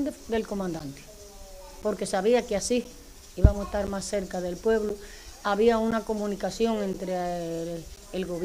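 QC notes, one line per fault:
0.79–7.97 s: periodic USB or driver dropouts. Short gaps of silence, each about 10 ms, recur every 1.02 s across this span. Each time, a brief run of samples never reaches the output, so the signal drops to nothing and resumes abruptly. The hard edges at each gap make a tick or pop. The strict spacing points to a background task stalling the USB bus or audio driver on a fixed cycle. The ticks sound only where signal is present.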